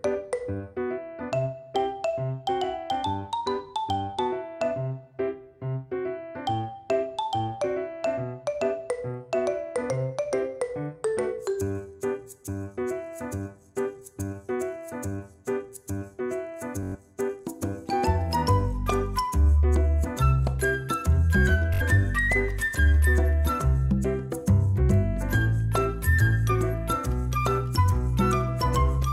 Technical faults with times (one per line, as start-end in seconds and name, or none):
16.83-16.95 Bluetooth stutter
21.74-21.82 Bluetooth stutter